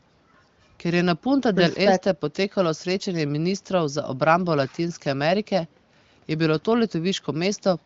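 No technical faults can be heard anywhere in this speech.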